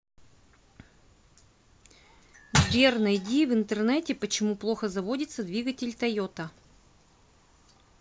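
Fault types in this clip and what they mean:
No faults can be heard in this speech recording. There is nothing to list by type.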